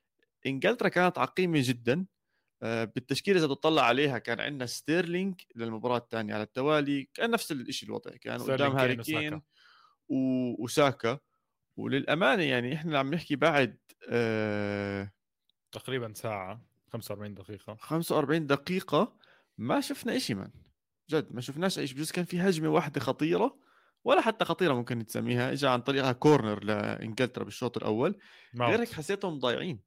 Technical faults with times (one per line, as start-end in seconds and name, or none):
none